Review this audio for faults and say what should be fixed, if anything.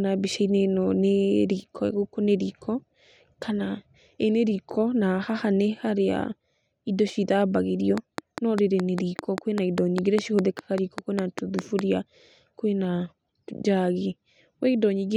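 A train of clicks runs from 7.98 to 11.80 s: about twenty evenly spaced pulses at 5 per second, well above the speech, likely from electrical interference or a faulty connection or power supply.

Preventing it means keeping nearby equipment and cables away from the recording chain and using a stable, properly powered interface.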